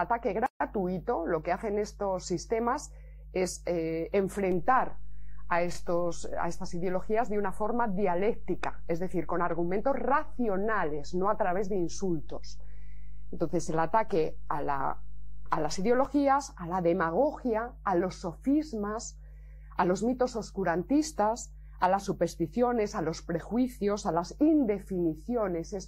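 The audio carries a DC step: at 4.52 s the waveform's zero line jumps to a new level, as happens when a converter recalibrates or an input with an offset is switched in, and the offset lasts until 16.05 s. Each jump is heard as a low thump or click while the sound itself continues unchanged. On a waveform the whole trace visibly shifts off centre between those times; a spectrogram shows a brief broadband vertical stripe at each step.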